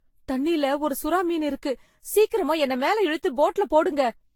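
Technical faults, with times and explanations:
Throughout, generation loss: the speech sounds swirly, smeared and hollow, with blurred consonant attacks and nothing above 19.2 kHz. That is more damage than a single moderate-rate pass would cause. The likely cause is the audio being decoded and re-encoded around ten times with a lossy codec, which fits Vorbis at roughly 68 kbit/s. Each pass re-quantises on a shifted frame grid, so the noise builds up rather than repeating.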